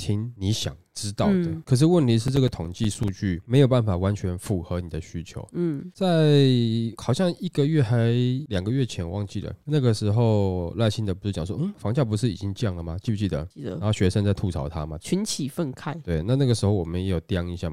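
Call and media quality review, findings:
Processor overload crackle, 2.28–3.08 s, over the speech. Probable component: audio processing thread or DSP starved of CPU. Mechanism: about ten buffers of around 5 ms miss their deadline, each replaced by silence with hard edges, giving gritty tearing that clears when the load drops. Waveform: short flat silent notches with abrupt cut-ins. Spectrogram: scattered thin vertical broadband streaks across the speech.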